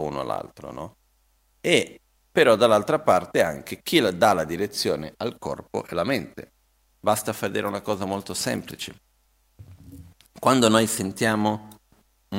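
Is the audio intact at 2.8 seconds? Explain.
Yes, at 2.8 seconds the speech runs through intact, with no dropout, click, distortion or other fault audible at that point.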